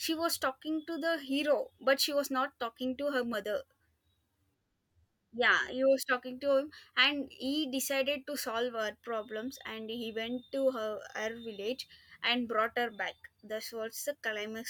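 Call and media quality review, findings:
Compressed frames skipped at 3.33 s: brief glitch at the join as the speech jumps ahead about one 21.3 ms frame, roughly 20 ms lost. Likely the decoder missing or rejecting a damaged frame. The audio jumps straight over the lost frame, so there is no silent gap as a dropout would leave.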